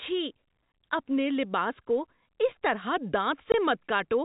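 At 0.72 to 0.74 s, just before "اپنے لباس کو اس", the speech drops out for 20 ms, and the same gap recurs at 3.52 to 3.54 s. Both are packet loss filled with silence: a packet never arrived and the receiver played silence in its place, and each gap fits a single 20 ms packet. The abrupt cut to and from silence leaves hard edges on each gap, heard over the 4 kHz-limited G.711 telephone band.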